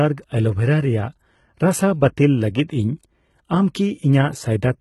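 Throughout, the speech carries heavy HE-AAC compression damage, likely at a very low rate near 16 kbps. The treble is rebuilt from copied lower bands, so s sounds turn gritty and metallic. A spectrogram shows blocky, repeated upper bands ending sharply at 11.9 kHz.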